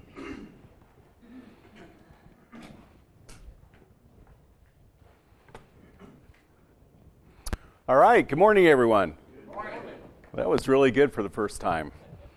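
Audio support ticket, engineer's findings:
Loud pop, 7.53–7.55 s and 10.58–10.61 s: single sharp transient on top of the sound, which carries on underneath. First pop sits a few dB above program level, second roughly 15 dB above. Likely a voltage step from a connector, switch or static discharge.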